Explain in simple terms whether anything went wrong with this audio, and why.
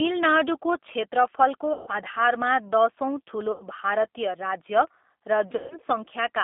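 The speech sounds thin, slightly rough and robotic throughout, with nothing above about 3.6 kHz. That is the G.729 codec, a phone-call compressor that rebuilds speech from a simplified model.

At 1.73–1.91 s, 3.52–3.64 s and 5.56–5.75 s, the voice smears into a fading buzz or hiss. This is VoIP packet loss concealed by the speech codec: chunks of the call went missing, and the decoder filled each gap by stretching the last sound it had.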